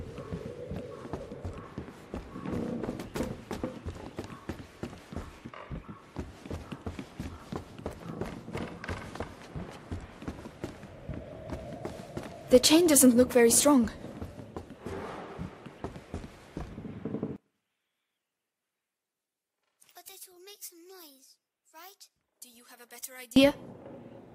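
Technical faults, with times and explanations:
17.36–23.36 s, one channel inverted: for six seconds the sound drops away, about 29 dB down, leaving only a faint residue. The likely cause is one channel flipped in polarity, so the shared content cancels when the two are summed to mono and only their small mismatch survives.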